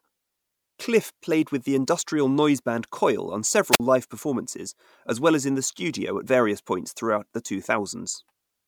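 Speech clip with a wireless microphone squelch dropout at 3.71 to 3.80 s. The radio link fades, hiss rises, and the receiver mutes for about 48 ms before "live performances as well".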